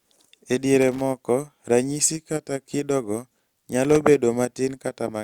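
Around 0.81 s the speech gets hit with loose connector crackle, a rough, scratchy burst running to about 1.01 s, and it comes back from 3.85 to 3.97 s. That's a worn or grubby contact somewhere in the chain making and breaking as it shifts, so the signal gets chopped on and off in quick, uneven bursts. Both bursts sound irregular and gritty.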